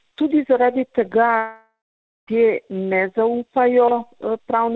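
From 1.38 to 2.29 s, a fading buzz replaces the sound, then silence. This is likely a long network dropout. That stretch never returns.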